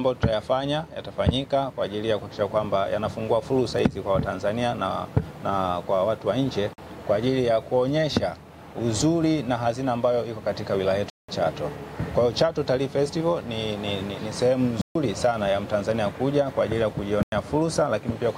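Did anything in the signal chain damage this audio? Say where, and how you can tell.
Yes, blocks of digital silence at the driver or buffer stage: hard-edged dropouts at 6.73 s (46 ms), 11.10 s (186 ms), 14.81 s (139 ms) and 17.23 s (93 ms). The lengths fit multiples of a 2048-sample buffer left unfilled. Network loss would instead bring smeared concealment rather than clean silence.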